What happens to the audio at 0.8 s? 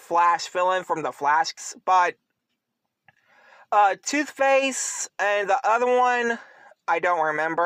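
Nothing goes wrong at 0.8 s: the audio plays through that moment intact, with no dropout, click or other fault.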